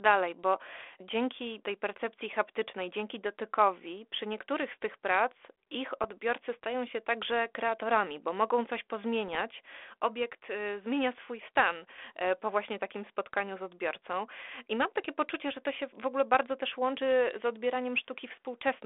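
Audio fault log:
6.02–6.09 s and 9.28–9.42 s, bit errors on an ADPCM link: two short bursts of pops and rasping roughness, about 70 ms and 140 ms long, with a brief change in level. A few bits in a thousand were flipped. Each wrong bit throws off the decoder's step size and prediction, so the damage rings on past the hit. On a waveform these show as jagged spikes and level steps. On a spectrogram they are broadband vertical smears inside the band-limited line, which cuts off near 3.5 kHz and fits a 32 kbit/s G.726 link.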